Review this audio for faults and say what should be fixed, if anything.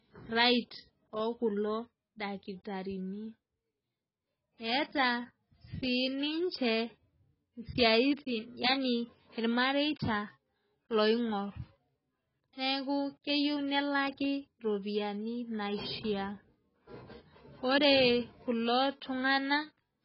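AAC compression damage runs through the whole speech clip. Nothing is present above about 5.6 kHz, so the sound is dull and boxed in. Sibilants turn fizzy and smeared. Sustained sounds warble. The likely cause is AAC-LC coding at a very low rate, which fits around 16 kbps. The encoder cut the top of the band to save bits. To prevent it, export from an uncompressed source at a much higher bitrate.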